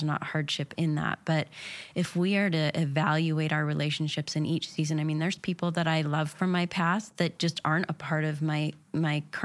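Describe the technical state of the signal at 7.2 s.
At 7.2 s the speech signal is intact, with no audible fault at that moment.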